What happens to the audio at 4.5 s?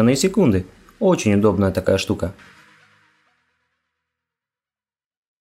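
At 4.5 s the audio is intact, with the level simply partway through a smooth fade-out that began somewhere around two and a half seconds and tapers away with no click or hard edge.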